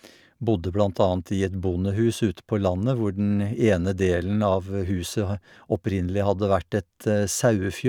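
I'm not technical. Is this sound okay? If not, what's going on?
Yes, the recording is technically sound, with nothing wrong with how the audio was captured or played back.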